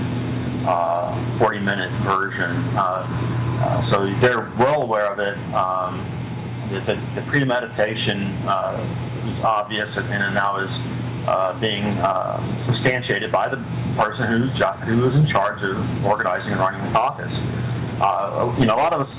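No technical faults are audible; the sound passes over a call path whose content stops at 4 kHz, consistent with a narrowband G.711-type codec.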